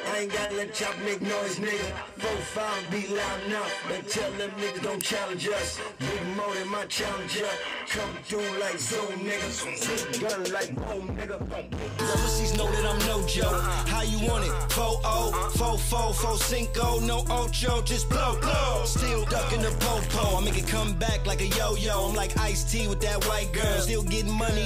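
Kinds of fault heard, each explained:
Electrical switching spike: three sharp snaps sit on top of the sound, likely arcs from a nearby switch or motor, the later two louder, peaking around -10 dBFS.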